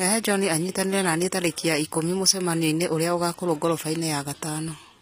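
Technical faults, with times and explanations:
Throughout, HE-AAC compression: the treble stays bright but sounds synthetic, with s sounds coming out gritty and metallic or lispy, and the codec damage is plainly audible across the speech. Nothing remains above 15.5 kHz. The likely cause is a low-bitrate HE-AAC v2 encode, around 24 kbps by the sound of it, where only the lower spectrum is truly coded and the upper bands are patched in from copied lower content, so the high harmonics no longer match the original.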